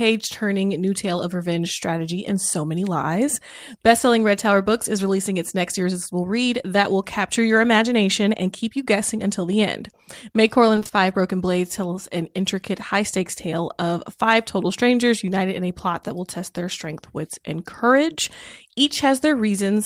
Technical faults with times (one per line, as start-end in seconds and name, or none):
10.75-10.91 repeated packet loss (robotic sound)